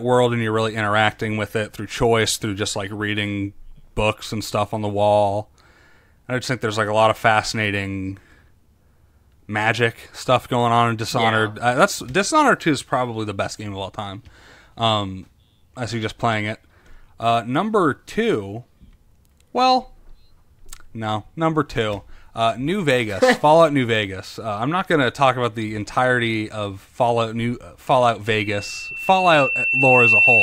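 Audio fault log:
28.26–30.43 s: loudspeaker feedback squeal. A single 2.7 kHz tone rises under the speech over roughly two seconds and ends up about 5 dB louder than the talker. The microphone is re-amplifying its own loudspeaker, and at that frequency the loop gain exceeds one.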